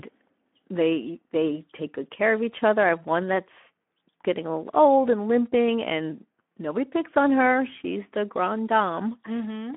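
From start to finish the speech carries Speex codec damage that is plainly audible. The sound points to a bitrate of roughly 11 kbps, which leaves the excitation short of bits, so voices come out noisy and hoarse. It sits on a telephone-style band of 200 Hz to 3.4 kHz. On a spectrogram the energy stops at about 3.7 kHz with nothing above, and the harmonic streaks below look smeared and grainy rather than clean.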